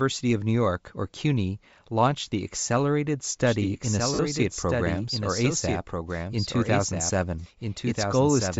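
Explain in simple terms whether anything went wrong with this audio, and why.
Bluetooth LC3 compression runs through the whole recording. The voice has a breathy, grainy edge, and the higher sounds seem thin and hissy. This is likely the Bluetooth LE Audio codec at work. It squeezes the sound into short slices of about 10 ms, and when it is squeezed hard it throws away much of the upper detail and patches that gap with invented noise. Here the damage is plain to hear.

A doubled audio track starts at about 3.46 s and lasts to the end. A second, somewhat quieter copy of the speech enters abruptly and trails the original by roughly one and a half seconds, so earlier sound keeps replaying underneath newer sound. The echo is dry, with no room tail. That points to the audio being captured twice by a slower path or an edit leaving two copies out of step.

Lost LE Audio frames cause a brief glitch from 4.14 to 4.19 s, a gap of about 50 ms. 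For that moment the sound becomes a short, noisy smear. The wireless link dropped a burst of audio packets, which fits a handful of lost 10 ms frames. To fill the gap, the decoder reused the last bit of sound it had, scrambled and faded, so the missing piece comes out as a blur of noise.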